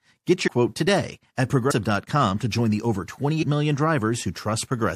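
At 0.47 s, 1.70–1.72 s and 3.42–3.44 s the sound jumps forward by roughly 100 ms, about four 23.2 ms compressed frames skipped each time.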